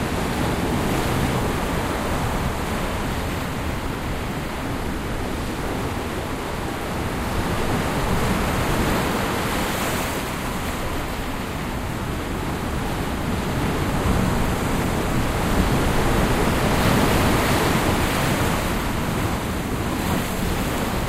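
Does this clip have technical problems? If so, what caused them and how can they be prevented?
No, nothing technical stands out in this recording of sounds, so there's no cause to track down and nothing that needs preventing.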